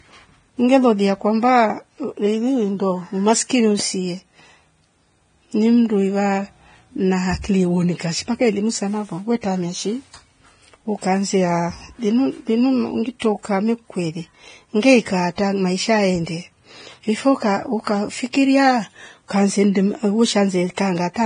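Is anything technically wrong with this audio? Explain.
Yes. Throughout the speech there's heavy codec damage that sounds like likely Vorbis compression. Nothing comes through above about 9.7 kHz, and the remaining treble is quantised so coarsely that detail turns into hiss. That gives a grainy, roughened sound, which fits a very low bitrate somewhere near 23 kbps.

There's also pre-echo at 13.19 to 13.22 s (about 23 ms) and at 18.32 s (about 17 ms). In each case a sharp attack lands late in a transform block, and the codec's noise, sized for the loud part, spills into the quiet gap before it. You hear a brief hiss just ahead of the onset, and the attack itself comes out smeared.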